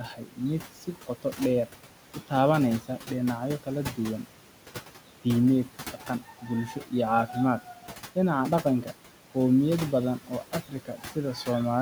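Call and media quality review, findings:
Noise suppressor artifacts, throughout: background pulled down by about 12 dB, frame by frame. The residual noise sinks between phrases and rises under speech. Probable component: noise suppression stage. Per-band gain follows a steady-noise estimate, so the residue pumps with the speech. Spectrogram: speckled, patchy noise floor that thins in pauses and fills in under speech. Waveform: the floor visibly sinks between phrases. Room noise, about 15 dB below speech.

Speech cut by the noise suppressor at 0.08–0.39 s (deepest about 12 dB), 0.81–1.39 s (about 11 dB) and 10.69–11.16 s (about 10 dB). Roughly 0.2 s, 0.15 s and 0.15 s are affected. Soft onsets and word endings sound swallowed or faint. The same suppressor classifies low-level speech as noise and turns it down with the background. Spectrogram: weak high-frequency consonant energy faded or missing. 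Waveform: envelope tails cut short, onsets ramping in late.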